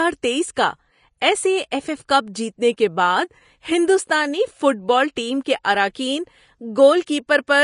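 Speech throughout has grainy, hissy treble and nothing above 10.5 kHz, likely from Vorbis compression, with damage consistent with a low bitrate around 32 kbps.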